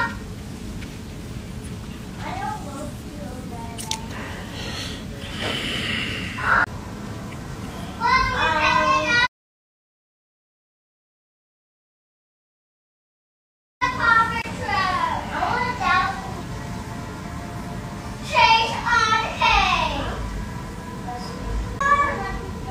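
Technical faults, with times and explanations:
6.64 to 6.67 s, CD skip: A short tick and a mute of around 30 ms, then the sound resumes from a different point. A jolt or disc flaw made the laser jump to another turn of the spiral, so playback breaks continuity.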